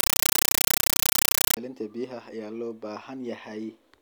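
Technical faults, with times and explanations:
0.00–1.57 s, compressed stream played as audio: loud chattering static in 8 ms bursts, repeating 31.25 times a second with silent gaps between them, points to an undecoded AC-3 stream whose frame data was output as samples. That rigid frame rhythm distinguishes it from random noise bursts or interference.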